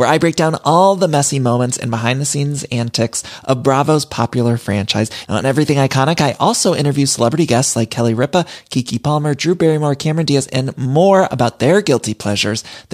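No technical faults can be heard in this recording.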